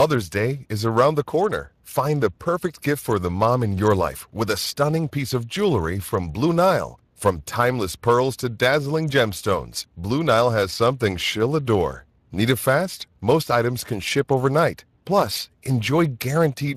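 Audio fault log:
throughout, Speex codec: the speech carries a plainly audible hoarse, noisy roughness that belongs to the codec's CELP coding, where too few bits go to the excitation signal. This fits a bitrate around 22 kbps. Unlike a plain low-pass filter, the damage sits in the voice's texture itself. Unlike transform codecs such as MP3, it gives no swirling or pre-echo. Nothing is present above 15.3 kHz.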